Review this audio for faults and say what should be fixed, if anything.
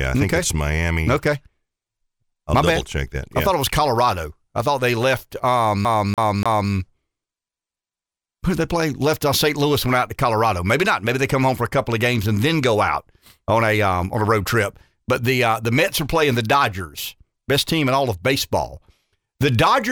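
CD stuck on one turn, 5.85 to 6.72 s: a scratch keeps knocking the laser back one track at the same spot on each revolution, so a 0.29 s slice of the speech plays three times in a row, with a brief mute at every jump. To prevent it, clean or replace the damaged disc and re-rip it with a secure, error-checking ripper before capture.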